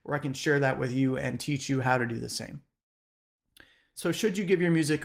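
No technical faults are audible anywhere in this recording.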